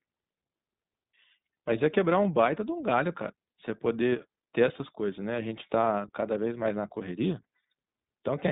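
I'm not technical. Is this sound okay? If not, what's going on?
No. The whole clip passes through the iLBC codec, a phone-call speech coder that keeps only about 150 Hz to 3.7 kHz, so the speech sounds muffled and noticeably rough, almost synthetic.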